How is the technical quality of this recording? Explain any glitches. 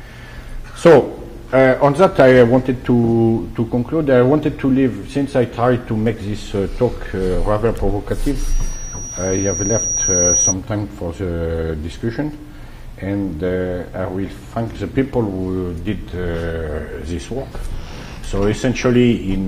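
The recording has one clear problem, a loudspeaker feedback squeal. From 8.39 to 10.54 s a single 5.8 kHz tone swells over about two seconds until it sits roughly 5 dB above the rest of the sound. A microphone is picking up the loudspeaker it feeds, and at that frequency the loop's gain exceeds one, so the tone keeps reinforcing itself. That steady growth from nothing is what sets it apart from a fixed interfering tone, which would hold at one level.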